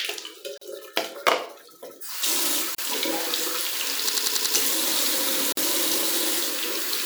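Brief silences cut into the continuous sound at 0.58 to 0.61 s (about 38 ms) and 2.75 to 2.78 s (about 34 ms), each a gap at a join of encoded pieces where encoder delay and padding weren't trimmed. From 4.09 to 4.55 s a 93 ms slice repeats five times as a 10.8 Hz stutter, a system hang loop on what fits a 4096-sample buffer. After it the sound resumes with essentially nothing skipped. A third join gap, about 49 ms, opens at 5.52 to 5.57 s.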